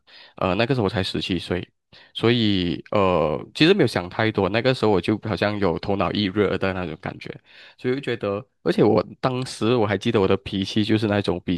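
No technical faults can be heard anywhere in the recording; the signal holds steady and continuous throughout.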